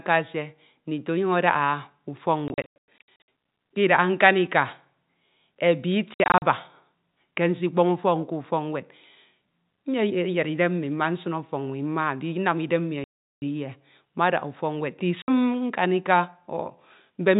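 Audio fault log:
2.48–3.27 s: packet loss filled with silence. About 460 ms of sound is missing, scattered over 800 ms in holes up to 100 ms long. The holes are multiples of 20 ms, which points to 20 ms packets. They are dead silent with hard edges, unlike concealment, which would smear or repeat the sound.
6.14–6.42 s: packet loss filled with silence. About 160 ms is lost across 280 ms, with the longest hole 60 ms. The short, stepped, hard-edged gaps come from whole packets being replaced by silence.
13.04–13.42 s: packet loss filled with silence. About 380 ms is lost in one stretch. It is a clean silent block with hard edges at both ends, without the fading of a level dropout, and its length is a whole multiple of the 20 ms packet.
15.22–15.28 s: packet loss filled with silence. A single 60 ms hole, three packets long, cuts the sound with an abrupt edge on each side. The surrounding telephone-band G.711 audio stays limited to below 4 kHz.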